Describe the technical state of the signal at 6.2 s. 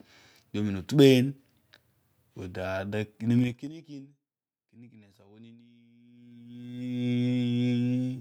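At 6.2 s you're in the middle of zipper noise, running from 6.04 to 6.83 s. The speech level changes about 25 dB in unsmoothed 1 dB steps, around twenty a second, and each jump clicks, so you hear a fast ticking riding on the level change.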